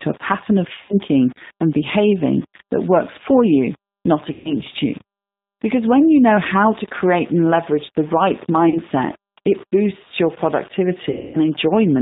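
From the start, the speech has a grainy distortion that rises and falls with its level. This is likely low bit depth without dither, fitting about 6-bit rounding, with a spectrogram noise floor about 25 dB down that follows the signal. Throughout, the G.729 codec at 8 kbit/s makes the speech rough and synthetic, with the spectrogram empty above 4 kHz. At 0.82, 4.33, 8.69 and 11.11 s, VoIP packet loss concealed by the speech codec stretches the last sound into a buzzy, fading tone lasting 0.13, 0.23, 0.13 and 0.27 s. Each shows up as smeared, repeated harmonics and a shrinking waveform envelope.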